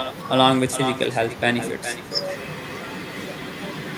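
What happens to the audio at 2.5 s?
At 2.5 s the speech is shadowed by echo with no canceller, and it runs the whole clip. The far end's loudspeaker feeds its microphone, so your voice returns about 0.4 s later, a thinner copy sitting about 10 dB down.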